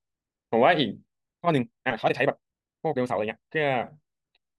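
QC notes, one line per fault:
1.35–3.63 s, time-stretched section: speech suddenly turns rushed at pitch unchanged, likely software squeezing it to 1.96× speed by dropping short pieces.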